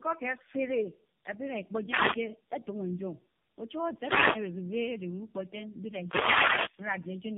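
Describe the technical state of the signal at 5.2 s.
At 5.2 s the speech carries tandem speech coding, which runs through the whole clip rather than starting or stopping there. The sound points to three low-rate AMR-NB passes in a row, decoded and re-encoded through G.711 between them, so each coder works on the previous one's errors. The result is rough, muffled and warbly. A spectrogram shows nothing above 3.5 kHz and smeared, blotchy harmonics.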